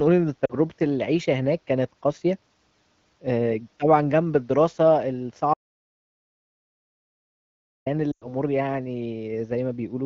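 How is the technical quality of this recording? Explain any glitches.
The recording has three glitches: two short bursts of lost AMR speech frames and one long dropout to silence. The speech comes through the AMR wideband (HD Voice) codec cleanly, with only light coding colour, which fits a higher rate such as 15.85 kbit/s.

Lost AMR speech frames, 0.45 to 0.53 s and 8.12 to 8.32 s: Radio errors corrupted chunks of the stream. For each bad chunk the decoder carried on with the last good pitch and vocal tract settings and kept turning the gain down. The first gap is about 40 ms, which fits two 20 ms frames, and you hear a quick warbly dip. The second runs about 100 ms, roughly five frames. There the sound drops to near silence within two frames before the speech comes back a bit weak and rough.

Audio dropout to silence, 5.54 to 7.86 s: The sound cuts off mid-flow and the line goes dead silent for about 2.3 s, with no room tone at all. 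Then it comes back mid-flow. That silence suggests the input was likely lost, from a dropped link or an accidental mute, while the recorder kept writing. Whatever was said in that stretch is gone.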